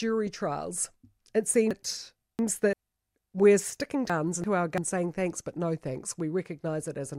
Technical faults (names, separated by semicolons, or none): chunks out of order